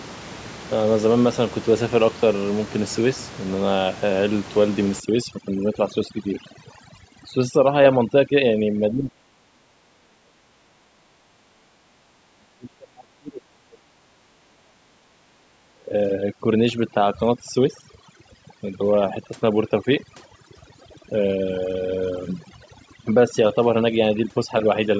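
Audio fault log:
5.0–25.0 s, overdone noise removal: the room noise, about 16 dB below the speech before 5.0 s, collapses into near silence with twinkling specks. Unlike simple gating, single frequency bands vanish while scattered fragments survive.
8.91–11.75 s, 12.34–15.01 s, 15.45–15.93 s, speech suppressed in double talk: the voice dips by up to around 40 dB, likely an echo canceller ducking it while the far side talked.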